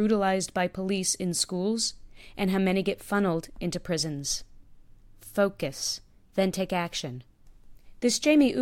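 Nothing in this speech recording stands out as a technical fault; it just runs along without any glitch worth pointing to.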